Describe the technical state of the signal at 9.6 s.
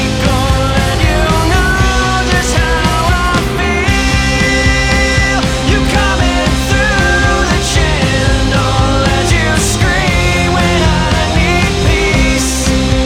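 Nothing is wrong with the signal at 9.6 s; the audio there is intact.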